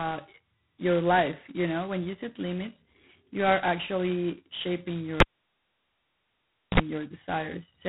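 From start to finish the speech carries G.726 ADPCM damage. The harsh, rasping hiss rises and falls with the speech level. That points to the 16 kbit/s mode, where only two bits a sample code the prediction error. Nothing passes above 3.9 kHz.

At 5.20 s, just after "you are actually shaping", a cable is pulled and plugged in. A pop cuts the sound to near silence for about 1.5 s. A brief 60 Hz mains buzz of about 50 ms follows as the plug's tip touches. A second pop at 6.80 s brings the sound back.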